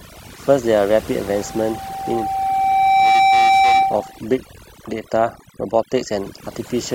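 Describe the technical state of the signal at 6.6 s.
At 6.6 s the speech is still under overdone noise removal, which runs throughout the clip. A noise reducer set far too aggressively is cutting individual frequency bands down or out whenever their level sits close to its noise estimate, so the quieter components of the voice are removed along with the noise. What remains is a lowered background that breaks up into twinkling, warbling artefacts.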